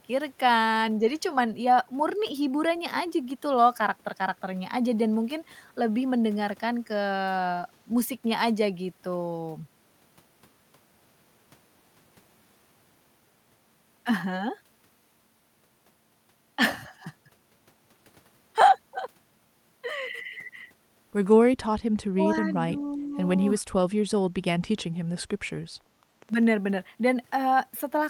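From 22.13 to 22.18 s, 22.40 to 22.45 s and 22.76 to 23.17 s, speech is suppressed in double talk: the voice dips briefly, deeply at first, then slightly, then moderately, likely because the echo canceller turned the local talker down while the far end spoke. From 24.21 to 26.44 s, a train of clicks brings about twenty similar ticks, unevenly spaced at about 8.6 per second and roughly as loud as the speech, likely from interference or a faulty connection. Unlike crackle, each tick is distinct and alike. From 25.02 to 25.13 s, the background is gated by the echo canceller: the room sound drops by about 15 dB, then returns.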